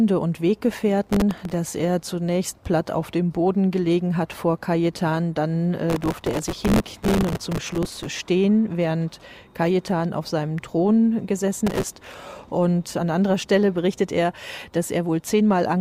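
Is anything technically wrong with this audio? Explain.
Yes. Processor overload crackle occurs from 1.04 to 1.54 s, 5.90 to 8.06 s, and 11.67 to 12.14 s. Missed deadlines replay stale audio in tiny hard-edged slices, consistent with a buffer of roughly 1.5 ms. The result is gritty tearing, seen as dense vertical broadband streaks on a spectrogram and as jagged steps in the waveform.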